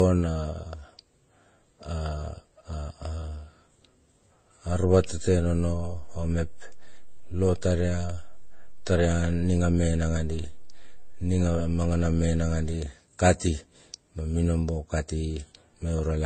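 Transcoding between lossy codecs runs through the whole speech clip. Nothing is heard above 14.7 kHz, and several kinds of coding artefact sound at once. The layered character likely comes from the audio passing through MP3, then HE-AAC, then Vorbis, each at a low rate around 32 to 37 kbit/s. Each stage spends bits encoding the previous stage's damage and adds its own, and the lowest cut-off in the chain is what remains.

A DC step occurs at 4.69 s, when the waveform's zero line suddenly jumps to a new offset. It is heard as a low thump while the speech carries on unchanged. The offset lasts until 12.74 s. This is the kind of shift produced when a converter recalibrates or an input carrying an offset is switched into the path.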